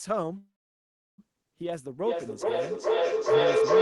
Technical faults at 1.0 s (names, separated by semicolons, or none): call audio freeze